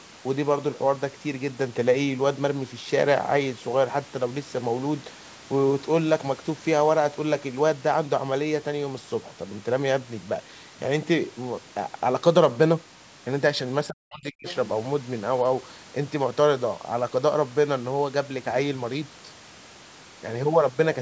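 From 13.88 to 14.47 s the talker's speech drops sharply, very deeply at its lowest point, likely speech suppressed in double talk as the echo canceller attenuated everything. From 14.48 to 14.55 s a brief, faint second voice appears well below the talker, likely the other side's voice leaking through as residual loudspeaker echo.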